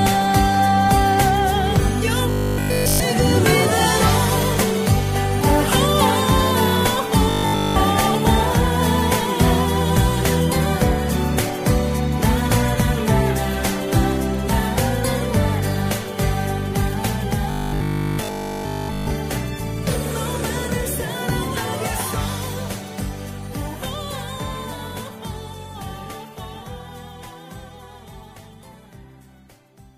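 From 2.30 to 3.00 s, 7.30 to 7.76 s and 17.51 to 19.11 s, robotic sound from repeated short buffers: a rigid 50 Hz metallic buzz, likely one 20 ms buffer looping with nearly nothing new getting through. A spectrogram shows evenly spaced 50 Hz harmonic lines; the waveform shows an identical repeating cycle.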